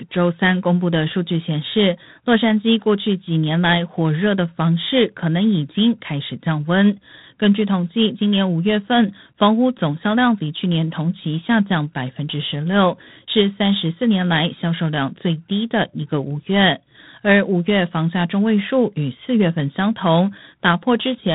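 From start to finish the speech runs through G.726 ADPCM, with a rasping hiss riding its level and nothing past 3.9 kHz, which fits the 24 kbit/s mode.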